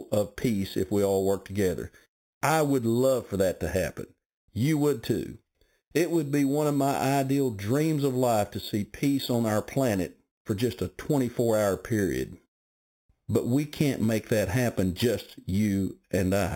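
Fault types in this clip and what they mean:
Imaging from sample-and-hold upsampling: unsmoothed repeated samples mirror the speech harmonics into 4 to 8 kHz, about -18 dB, sloping against the pitch; the waveform shows staircase steps.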